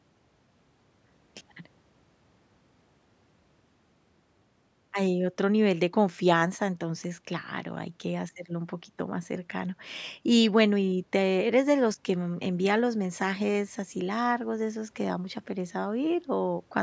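Speech through call microphone processing, with the lowest bass rolled off by its high-pass filter and nothing above 8 kHz, and no technical faults to report.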